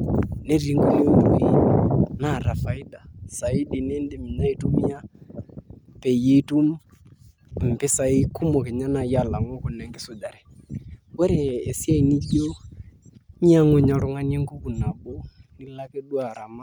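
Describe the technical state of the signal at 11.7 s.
At 11.7 s the speech signal is intact, with no audible fault at that moment.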